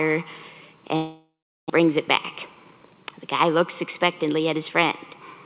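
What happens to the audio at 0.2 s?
Nothing goes wrong at 0.2 s: the audio is intact there, carried through the call path's G.711 A-law coding with its usual band limit, so nothing is heard above 4 kHz.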